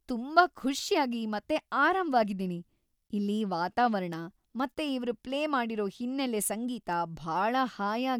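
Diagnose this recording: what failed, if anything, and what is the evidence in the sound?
Nothing failed: no stage in the chain, from capture through conversion, processing and transport to playback, leaves an audible fault anywhere in this speech recording.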